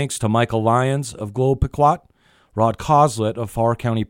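No technical faults detected.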